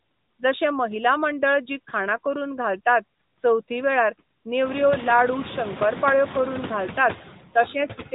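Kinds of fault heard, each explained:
Noise suppressor artifacts: frame-by-frame gain cuts of about 18 dB on bands judged steady noise, so the background drops between phrases and swells under speech, most clearly once room noise rises near halfway. Spectrograms show flickering, blotchy noise patches; the waveform's floor pumps.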